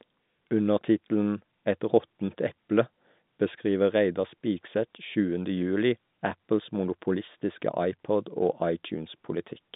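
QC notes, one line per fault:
No faults heard.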